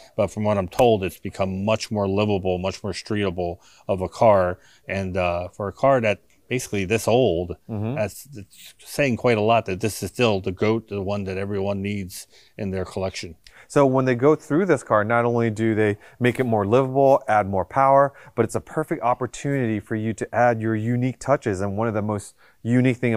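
Nothing goes wrong anywhere in the recording, so there's no technical fault to point to at any moment.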